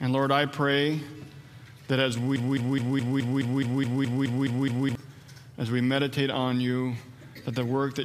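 From 2.36 s to 4.95 s, a fragment of about 0.21 s repeats exactly, back to back, twelve times in a stuttering broken-record loop. The audio due in that span never plays. Most likely the player or stream stalled and kept resending its last buffer.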